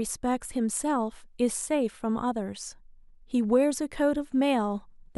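No technical faults occur at any point in this speech recording.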